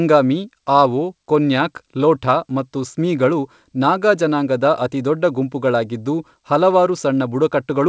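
No faults are present in this speech; the call path is operating as designed, with the band stopping at 8 kHz as expected of G.722.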